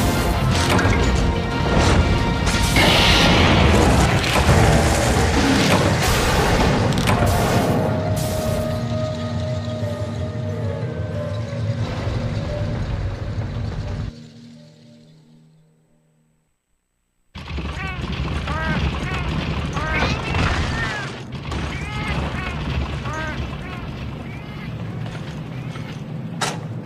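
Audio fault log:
No faults found across the clip; nothing to log.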